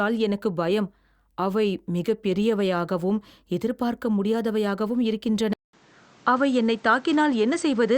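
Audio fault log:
5.53–7.98 s, input switched to a poorer device: after a 200 ms silence, the speech loses everything above 8.7 kHz and carries a new, faint background noise at an unchanged level. That gap and fresh noise floor likely mark a device swap, not mere filtering.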